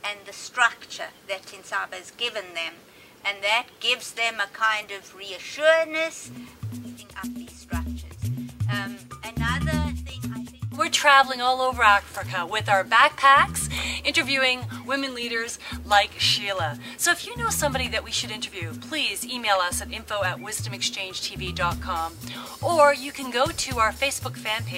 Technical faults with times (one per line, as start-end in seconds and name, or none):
4.80-4.84 damaged data in a compressed stream